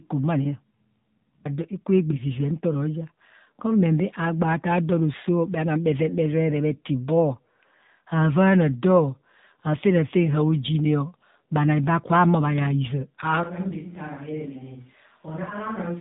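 Throughout, the speech sounds buzzy and synthetic, with nothing above 3.8 kHz. This is AMR narrowband mobile codec damage, plainly audible and consistent with a low rate near 7.4 kbps.

At 13.43 s, just after "ma yaa hizaa", the voice turns suddenly hollow and roomy, roughly 10 dB quieter, with faint room noise until the end. This is likely a switch to a distant microphone.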